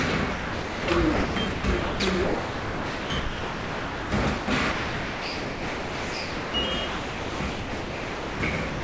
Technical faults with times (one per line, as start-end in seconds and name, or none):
0.32-0.88 sound dropped by the voice detector
1.14-4.12 sound chopped by the voice detector
4.38-6.54 sound chopped by the voice detector
6.88-8.40 sound chopped by the voice detector
8.70-8.84 sound dropped by the voice detector